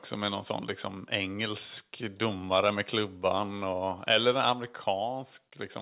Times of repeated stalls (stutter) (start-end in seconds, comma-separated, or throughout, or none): none